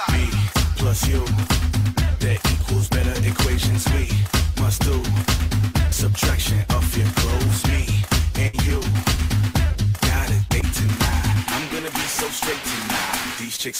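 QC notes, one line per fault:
8.47–8.56 s: burst of packet loss. Roughly 60 ms of audio never arrived in time. The receiver stretched the last sound to cover the gap for about 57 ms, fading it down. Playback then resumes later, with that stretch skipped.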